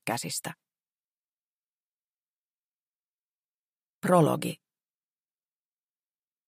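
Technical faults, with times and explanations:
Nothing technical stands out here; no dropouts, glitches or other faults turn up anywhere in the recording.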